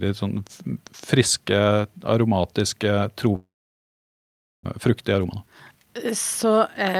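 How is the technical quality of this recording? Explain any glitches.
The recording has two clear glitches, from just before the midpoint to the end.

From 3.35 to 4.67 s there is a long network dropout. The sound smears into a brief fading buzz, then falls silent for most of that stretch. Audio likely stopped arriving, and about a second of speech never plays.

From 4.89 to 6.97 s there is a jitter buffer speed-up. Speech runs about 11% fast at unchanged pitch and sounds hurried. The receiver trims tiny pitch-period slices repeatedly, about 0.3 s in total, to shed the extra delay after the gap.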